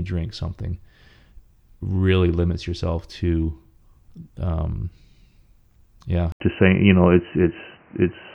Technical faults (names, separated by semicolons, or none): input switched to a poorer device